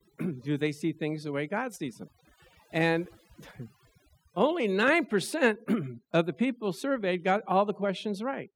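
From start to finish the speech carries overdone noise removal. The noise reduction was pushed well past what the recording needed, so any frequency band sitting close to the estimated noise floor is pulled far down or shut off entirely, and the quieter parts of the voice are cut along with it. Between phrases the background drops and breaks up into twinkling, warbling specks.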